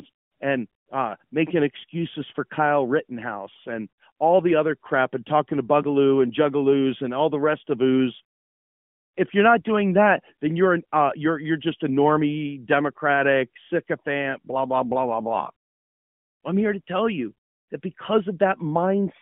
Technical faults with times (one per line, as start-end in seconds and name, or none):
none